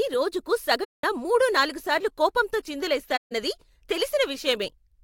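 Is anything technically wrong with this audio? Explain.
Yes. AAC frame loss with muting causes dropouts at 0.84–1.04 s and 3.16–3.32 s. The missing frames are zeroed, so the speech fades into soft-edged holes of about 0.19 and 0.15 s.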